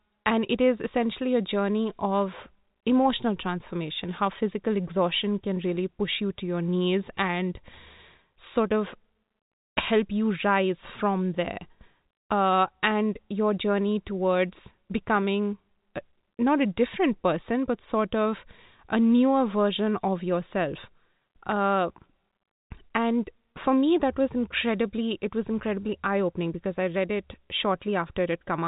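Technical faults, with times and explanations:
No faults: the speech is band-limited to about 3.8 kHz, consistent with G.711 mu-law telephone coding, and any quantisation noise from that coding is faint at most.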